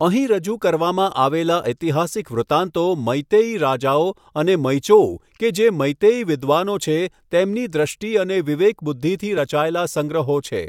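No technical faults are audible.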